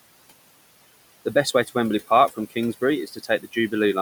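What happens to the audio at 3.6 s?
The speech sounds swallowed and faint from 3.06 to 3.73 s, dropping by up to about 13 dB. The noise suppressor mistook this speech for background noise and turned it down. Underneath, the noise suppressor artifacts persist, because the suppressor cuts noise by about 20 dB, frame by frame, across the bands it judges to be noise.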